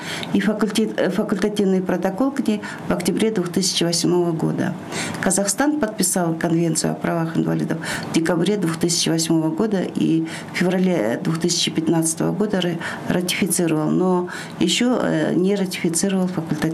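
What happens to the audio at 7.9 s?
Chunks out of order occur from 7.94 to 7.96 s. Two 10 ms pieces of the audio swap places: the piece that belongs first arrives one chunk late and plays after its neighbour. No audio is missing, but the reordering creates three abrupt joins where the waveform no longer lines up. Within that brief 20 ms span this produces a tiny garbled stutter, after which playback continues in order.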